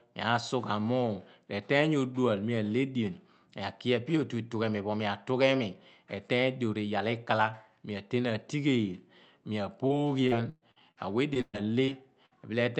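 A brief smear at about 9.87 s is the first short concealed packet loss: roughly 20 ms of the speech never arrived in time, so the receiver stretched the preceding sound across the hole and blended back into the real signal. The same tiny wobble recurs at about 11.34 s and 11.85 s, each time covering about 20 ms.

From 10.28 to 10.98 s the speech turns choppy. This is repeated packet loss with a robotic sound. Four separate gaps, the longest about 119 ms, add up to about 240 ms missing, so roughly a third of that stretch is patched audio. Each patch extends the last sound, and the next loss arrives before the voice has properly recovered.

At 11.41 to 11.55 s the last sound is held and fades toward silence, with about 40 ms dropping out altogether. This is a burst of packet loss. About 120 ms was lost in a row, the concealment was turned down as the gap went on, and the speech resumes further along with that portion gone. 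A shorter burst at 12.26 to 12.33 s removes about 60 ms in the same way.

Beneath all of this, the Opus call path's band limit at 8 kHz caps the top end.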